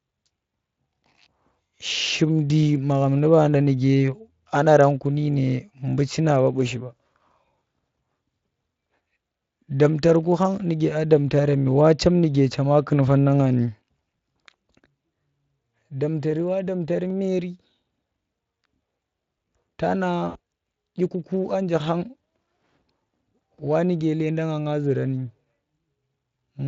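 A speech recording carried over Speex at a bitrate that points to about 24 kbps, which leaves only light codec colouring, has two technical faults. VoIP packet loss concealed by the speech codec occurs just after "nga ni" at 14.17–14.19 s, fitting one lost 20 ms frame, and again at 20.29–20.37 s, fitting three frames. The decoder extrapolates a buzzy tone or coloured noise that fades, which shows as smeared harmonics and a shrinking waveform envelope. At 17.10 s a single sharp click sounds, likely dropped samples losing a fraction of a millisecond. It appears as a waveform step and a thin vertical spectrogram line.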